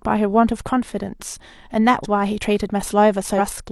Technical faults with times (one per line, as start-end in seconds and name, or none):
2.00-2.06 compressed frames skipped
3.35-3.39 compressed frames skipped